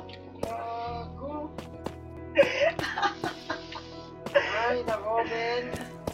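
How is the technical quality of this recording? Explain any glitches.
There's nothing glitchy to point to here: no dropouts, clicks or stutters turn up anywhere in the recording.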